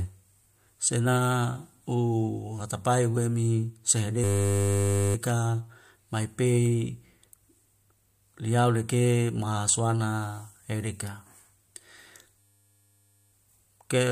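A speech clip with two system hang loops. The first runs from 4.24 to 5.15 s, the second from 12.39 to 13.32 s. Each time, a 10 ms slice of sound repeats exactly, about ninety times over. At that length it becomes a steady 100 Hz buzz. The system froze while the audio hardware kept replaying its short ring buffer. Little or no speech appears to be lost around the buzz.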